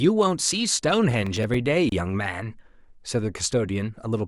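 From 1.11 to 1.54 s the speech is overrun by processor overload crackle. The processing could not finish its short buffers, each roughly 10 ms long, before their deadlines, and a handful of those deadlines were missed. Each miss replayed a fragment of old audio with hard edges, giving a gritty, tearing crackle over the voice. On a spectrogram this appears as thin vertical broadband streaks. The waveform shows abrupt steps and repeated snippets.

At 1.89 s there is a gap at a join of encoded pieces. Two separately encoded pieces were joined without trimming the encoder's start-up delay and the padding in its final frame, which left a silence of 27.1 ms inside continuous speech. The voice drops out briefly and then resumes exactly where it stopped. The waveform shows a flat stretch with slightly smeared edges, and the spectrogram shows a narrow empty column running through every frequency band.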